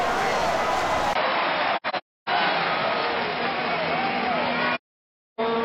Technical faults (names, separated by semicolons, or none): input switched to a poorer device; AAC frame loss with muting